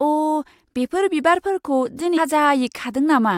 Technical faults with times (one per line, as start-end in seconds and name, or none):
2.16 damaged data in a compressed stream